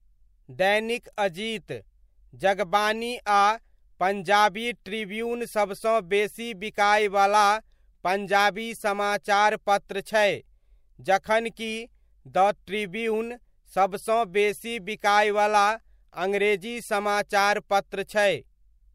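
No technical faults can be heard anywhere in the recording. The speech comes through without any interruption or disturbance from the signal chain.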